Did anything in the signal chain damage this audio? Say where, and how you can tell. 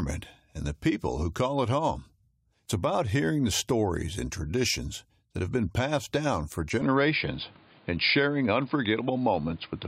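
Yes. From 6.82 s, right after "been passed down for", the speech abruptly turns dull and boxy, with nothing above 5 kHz and new background noise well below the voice, though the level holds and there's no gap. That likely points to the input switched to a poorer device at the driver stage.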